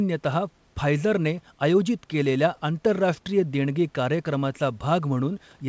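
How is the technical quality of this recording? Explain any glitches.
The technical quality of this recording is good and there are no glitches to explain, only the ordinary narrowing of a call line that leaves nothing above 8 kHz in the speech.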